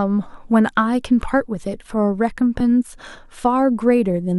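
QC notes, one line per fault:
2.60 s overlap between stream segments: overlapping segment timestamps made the player discard about 8 ms of real speech, so the waveform jumps.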